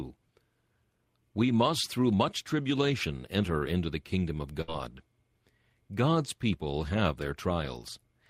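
A speech clip with a burst of packet loss from 4.61 to 4.70 s, right after "into the kingdom of". The last sound is stretched and fades for about 63 ms. Then about 60 ms of audio is skipped.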